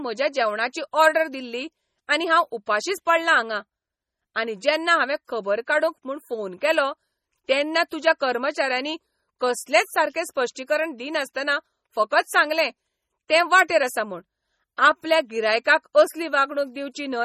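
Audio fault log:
throughout: MP3 compression, likely from a low bitrate around 32 kbps; nothing above 16.9 kHz, with watery, swirling treble and smeared attacks, not a simple filter.
7.90 s: pre-echo, just after "म्हूण फोन केलो तेन्ना"; a short hiss spreads about 18 ms ahead of a sharp attack, softening it, unlike a click.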